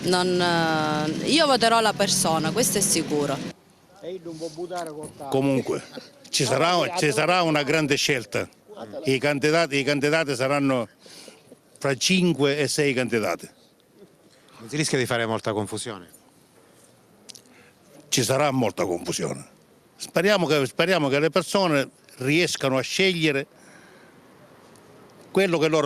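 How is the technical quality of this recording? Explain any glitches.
No technical faults are audible.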